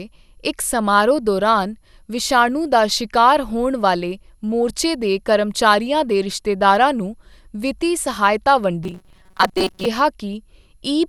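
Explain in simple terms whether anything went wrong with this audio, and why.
Two things went wrong with this speech recording.

The first runs through the whole clip. The sound is swirly, smeared and hollow. Sharp starts of sounds come out blurred. This is generation loss. The likely cause is that the audio was squeezed with a lossy codec, unpacked, and squeezed again, about five times over. Each round throws away a slightly different slice of detail, and the damage piles up.

The second comes at 8.84 s, just after "ਰਿਸ਼ਤੇਦਾਰਾਂ ਨੂੰ ਵਿੱਤੀ ਸਹਾਇਤਾ", and lasts until 9.86 s. The speech turns into a stiff, metallic buzz at 188 Hz. This is robotic sound from repeated short buffers. New audio was arriving too slowly, so the playback kept looping a tiny scrap of sound, which fits a chunk of about 5 ms. Roughly half of the real audio in that stretch was skipped.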